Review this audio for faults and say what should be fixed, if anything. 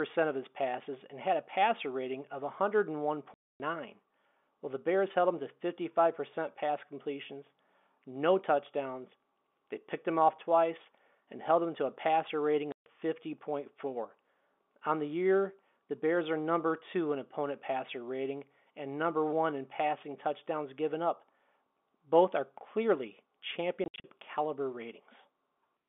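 Packet loss filled with silence cuts hard-edged holes at 3.34–3.60 s, 12.72–12.86 s after "to a passer rating", and scattered gaps within 23.84–24.04 s, sized in 20 ms steps. True silence, not smeared or repeated sound, separates this from concealed loss. Add jitter buffering and packet-loss concealment on the receiver.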